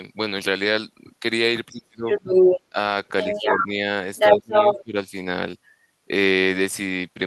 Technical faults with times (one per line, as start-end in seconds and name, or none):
1.71-2.09 speech suppressed in double talk
2.09-2.61 other side's voice leaking through
2.70-2.78 speech suppressed in double talk
3.22-3.67 other side's voice leaking through
3.27-3.75 speech suppressed in double talk
4.16-4.84 other side's voice leaking through
4.37-4.96 speech suppressed in double talk